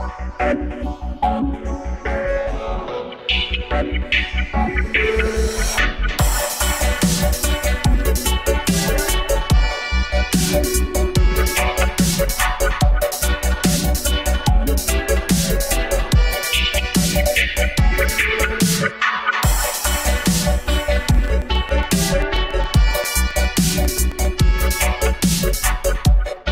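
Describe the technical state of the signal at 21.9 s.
At 21.9 s the signal carries a train of clicks. It runs from 21.15 s to 24.26 s. Sharp pulses repeat at a steady 7.4 per second, about twenty in all. Each has much the same shape. They peak around 5 dB above the surrounding sound. The pulses ride on top of the audio and stay audible in quieter gaps. They are heard as regular ticking. The likely cause is interference from nearby equipment or a faulty connection or power supply.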